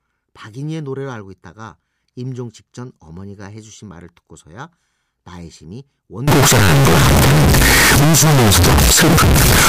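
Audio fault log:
6.28–9.68 s, float read as integer: 32-bit float samples were likely read as 32-bit integers, squaring the waveform at an almost fixed, high level, so speech turns loud, harsh and noise-flooded.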